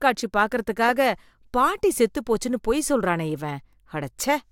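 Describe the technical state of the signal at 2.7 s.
At 2.7 s the speech signal is intact, with no dropout, distortion, glitch or other audible fault.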